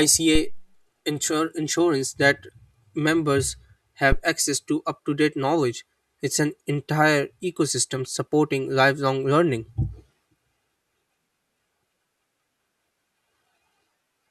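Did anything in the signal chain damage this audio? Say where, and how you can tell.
Yes, at the analogue input stage. There are two phantom power thumps in this speech clip: a deep thud from 0.35 to 0.72 s peaking at about -11 dBFS and dying away over roughly 83 ms, and a sharper one from 4.12 to 4.21 s at about -7 dBFS that decays in about 20 ms. A supply being switched on a live input sends a DC step through the coupling capacitors. On a waveform, each thump is a sudden one-sided swing that relaxes back to zero. On a spectrogram, each appears as a short burst concentrated in the lowest frequencies.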